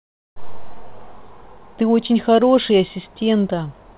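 Nothing goes wrong anywhere in this speech, and the only thing to notice is the WebRTC call path it travelled over, which leaves no content above 4 kHz, just what you'd expect from a narrowband telephone codec like G.711 mu-law.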